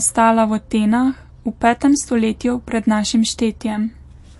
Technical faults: MP3 compression

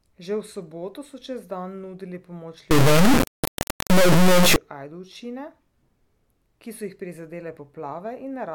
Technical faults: integer read as float

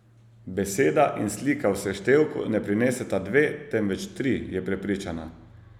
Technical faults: none

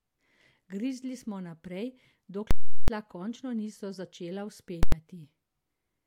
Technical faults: invalid numbers at full scale

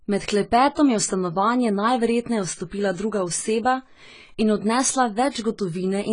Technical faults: AAC compression; pre-echo

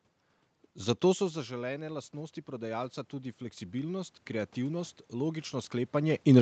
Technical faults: automatic gain rising

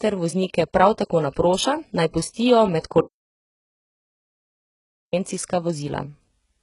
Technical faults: HE-AAC compression; audio dropout to silence

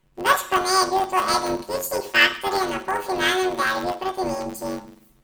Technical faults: planar audio read as interleaved

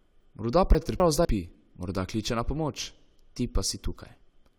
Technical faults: chunks out of order

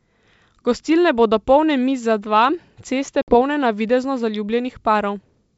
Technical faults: packet loss on an ADPCM call

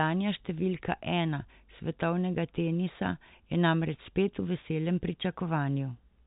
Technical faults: none

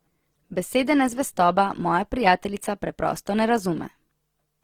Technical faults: Opus compression

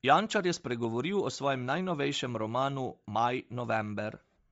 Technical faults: Bluetooth LC3 compression

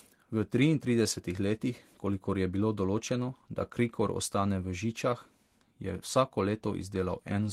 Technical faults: none

